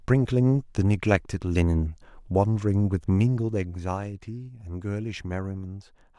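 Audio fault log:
3.29 to 4.01 s, zipper noise: the speech level falls by around 10 dB. It moves in 1 dB jumps with no smoothing. Each jump lands as a small click. At about twenty steps a second, the clicks blur into a ticking zip over the fade.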